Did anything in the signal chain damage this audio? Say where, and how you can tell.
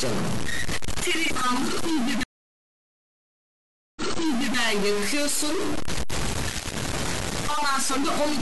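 Yes. A data line at the converter, or in the digital wiring right after it, has likely got one bit stuck at a fixed value. Throughout the clip, that corrupts about half of all samples by the same fixed amount, in a pattern that follows the waveform, so the speech carries a constant distortion. Because small values near zero flip the bit's effect with their sign, even the pauses between phrases fill with noise instead of falling silent.

A stream reconnect damaged the clip at the network stage between 2.23 s and 4.57 s. The connection dropped, the player went silent for about 1.73 s, then reconnected and started a fresh decoder partway into the stream. The server resent a burst of already-played material, so the audio picks up about 0.6 s earlier than where it broke off, repeating a short stretch. The new decoder's first frame comes through faded in.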